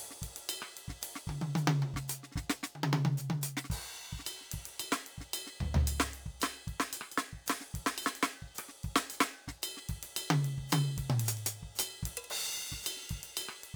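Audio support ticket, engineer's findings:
Sample clock jitter, throughout the music. Hiss and roughness tracking loud, bright passages, gone in silences. Probable component: unstable converter clock, timing wander of several microseconds. Error scales with waveform slope, sitting only about 15 dB under the music. Spectrogram: noise floor rising with high-frequency content, clean in gaps. Waveform: fuzz on steep edges.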